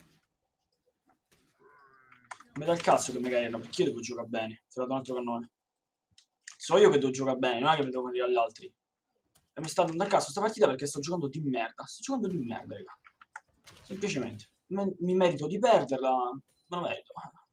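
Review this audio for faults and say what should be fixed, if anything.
Sound cut by the noise suppressor occurs at 0.00–1.14 s, 1.31–1.63 s, 12.96–13.85 s, 14.46–14.70 s and 16.44–16.71 s, with drops of about 20, 11, 20, 20 and 21 dB. Within each span only part of the sound is hit, from around a sixth of a second to well over half a second. The suppressor misjudged this material as noise and pulled it down below its surroundings. On a waveform these stretches show a sudden narrowing of the envelope, and on a spectrogram they appear as darker, thinned patches across the band. To prevent this, lower the suppressor's strength or tune its noise profile so that this material is not treated as background.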